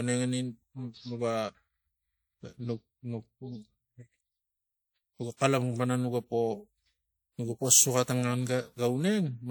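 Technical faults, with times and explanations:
5.37–5.41 s, pre-echo: a short hiss rises about 37 ms ahead of a sharp speech onset, softening its attack. The codec spread quantisation noise across its whole transform block, so noise scaled for the loud onset leaked into the quiet stretch just before it.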